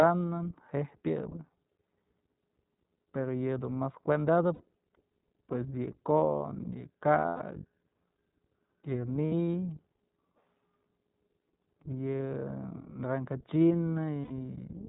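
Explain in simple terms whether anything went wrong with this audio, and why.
Two things went wrong here. The whole recording went through the iLBC codec, a phone-quality voice codec. It throws away everything above 4 kHz, so the speech sounds muffled, and the way it rebuilds the voice leaves a plainly rough, slightly synthetic edge.

There are also five spots with lost iLBC frames: 4.54 to 4.61 s, 7.26 to 7.42 s, 9.26 to 9.54 s, 12.17 to 12.21 s and 14.23 to 14.32 s. Chunks of audio never arrived, so the decoder filled each gap by repeating the last bit of voice with some noise. That sounds like a brief held, buzzy vowel. Around 9.3 s the losses come in several short bursts rather than one gap. The voice snaps back almost immediately after each one.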